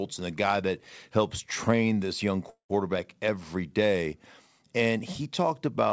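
Right after "helps train this young", at 2.50 s, the speech halts and its last sound carries on as a fading buzz or hiss that sinks into about 120 ms of silence before "every day" resumes at 2.71 s, with nothing lost. This is a call audio freeze. Packets were likely held up in transit, so the jitter buffer ran empty and the receiver stretched the final sound to fill the gap, pushing everything after it back by 195 ms.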